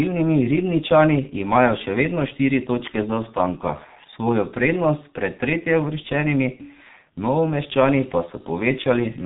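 Throughout the speech, G.723.1 codec damage is heavy. Cutting bandwidth to a hard 4 kHz ceiling and updating its voice model only every 30 ms frame leaves speech muffled, hoarse and smeared at consonants, fitting roughly 6.3 kbit/s. A spectrogram shows empty space above 4 kHz and blocky, blurred formants.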